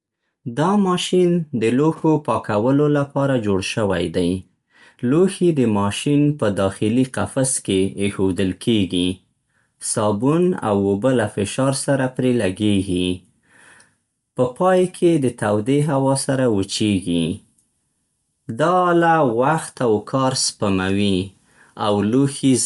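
Throughout, the speech has likely passed through Bluetooth LC3 compression, a transform codec whose artefacts point to 10 ms frames at around 48 kbps. Nothing remains above 11.6 kHz, and plainly audible codec damage gives the voice a breathy, grainy edge.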